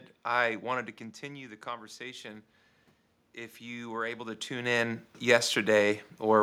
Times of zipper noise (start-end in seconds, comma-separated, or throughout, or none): none